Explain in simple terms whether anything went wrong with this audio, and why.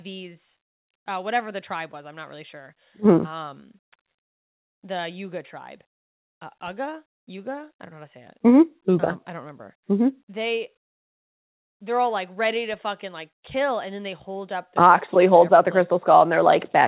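Nothing went wrong; it sounds like ordinary call audio.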